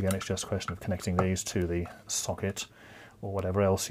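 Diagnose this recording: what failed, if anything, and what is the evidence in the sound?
Bit error spikes, arising in the digital path, in storage or on a link, cause three isolated sharp ticks at 1.62 s, 2.58 s and 3.39 s. Each is a flipped bit in one sample, or two adjacent samples at 3.39 s, jumping by a power of two and snapping straight back. They peak around -25, -18 and -25 dBFS. On a waveform each is a lone vertical needle; on a spectrogram, a thin full-bandwidth vertical line unrelated to the surrounding sound.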